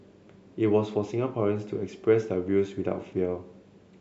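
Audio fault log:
No fault is heard anywhere in this speech recording. The log has nothing to record for it.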